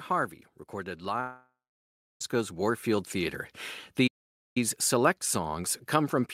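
Starting around 0.99 s, automatic gain rising kicks in: the gain control decides the level is too quiet and pushes it up by about 8 dB, so the speech and the background swell together gradually through to roughly 3.44 s.

Inside that swell, from 1.20 s to 2.21 s, there's a long gap that sounds like a long network dropout, with about a second of audio likely never arriving. The last sound smears into a fading buzz, then roughly 0.63 s of near-silence, and speech resumes further on with the missing stretch simply gone.

At 4.07 s the sound stops mid-flow for about 0.49 s, then picks up again at 4.57 s. That's a playback stall, likely the player running dry or getting blocked and going quiet until it recovered.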